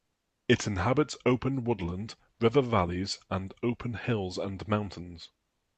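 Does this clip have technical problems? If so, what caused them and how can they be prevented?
Yes. From 5.47 s to the end at 5.78 s, the last 0.3 s, the natural room background, which sat roughly 53 dB below the loudest speech, drops out and is replaced by a steady, featureless hiss about 4 dB quieter. This is comfort noise in place of the background, likely from Opus discontinuous transmission: the sender's voice detector judged the pause silent and stopped sending audio, so the receiver synthesised noise roughly matching the background's shape. The call path limits the band to about 8 kHz throughout. Disabling DTX on the sender, or recording locally before the call codec, would keep the real background intact.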